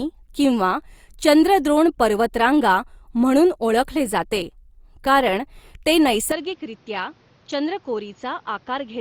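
At 6.32 s, after "ओळखले जाते कारण ते", the input likely switched to a poorer device; speech turns dull and quieter, with faint new noise.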